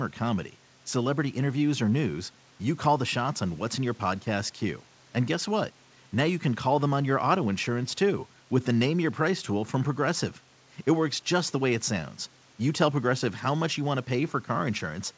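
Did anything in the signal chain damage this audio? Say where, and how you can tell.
No, nothing in the chain has damaged the signal: it shows the normal character of a WebRTC call path, with nothing above 8 kHz, which fits a G.722 wideband codec working at its usual bandwidth limit.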